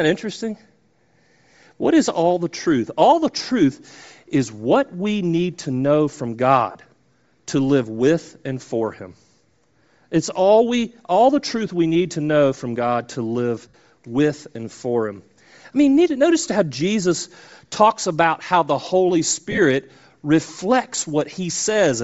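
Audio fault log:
Throughout: Bluetooth LC3 compression, most likely near a 32 kbps setting with 7.5 ms frames. The upper band is stripped and refilled with noise, so the speech sounds breathy and grainy. On a spectrogram the top of the band shows speckled noise.
6.71 s (about 40 ms, after "need to know from"), 13.68 s (60 ms, between "to live" and "with and for"), 19.51–19.59 s (short scattered bursts): lost LE Audio frames. The decoder repeats the last spectrum with randomised signs, producing a noisy smear. On a spectrogram this appears as blurred, flattened patches, and the waveform shows fuzz rather than silence.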